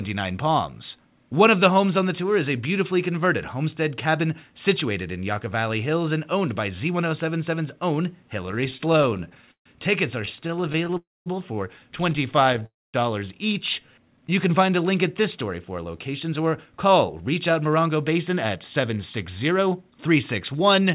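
From 8.46 to 10.95 s the speech catches and drags in a rapid series of tiny hitches, 34 of them, the longest about 141 ms, so the line seems to trip over itself. This is repeated stalls, or stutter: packets kept arriving late, the jitter buffer ran dry again and again, and the receiver held each last sound until data returned. About 474 ms was filled this way, nearly a fifth of the span, with nothing lost.

Right after, at 10.97 to 11.28 s and again at 12.66 to 12.96 s, the audio briefly smears into a fading buzz or hiss and then drops to silence for roughly 210 ms and 220 ms before carrying on where it stopped. Each is a call audio freeze, likely caused by packets held up in transit until the jitter buffer emptied. The receiver stretched the last sound to bridge the wait, adding about 285 ms and 279 ms of delay with nothing missing.

Between 13.80 and 14.31 s, just before "can find a link", the speech slows to about 88% of normal speed at unchanged pitch, its sounds drawn out. 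That is a jitter buffer slow-down: with its reserve running low, the receiver repeated single pitch periods to rebuild it, adding about 68 ms.

After "link at this story", from 15.78 to 20.79 s, the talk runs slightly hurried at about 106% speed, pitch intact. This jitter buffer speed-up came from a buffer holding more audio than it needed, so the receiver trimmed short pitch-period slices, roughly 0.3 s in total, to pull the delay back down. Throughout, nothing sounds above 4 kHz, which fits a narrowband G.711 mu-law call path at 64 kbps.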